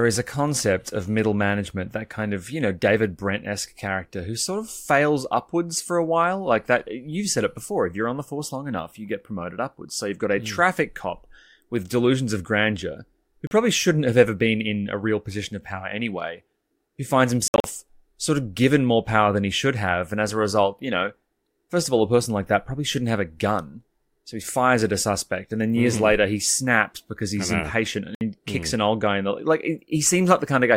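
Audio packets likely arrived at the headphones too late and were dropped, a Bluetooth dropout. The speech cuts abruptly to silence for 41 ms at 13.47 s after "delusions of grandeur who". It breaks into scattered gaps totalling 122 ms between 17.48 and 17.64 s after "power anyway who finds". It drops out for 61 ms at 28.15 s after "impatient and". Each time it resumes as if it had kept playing.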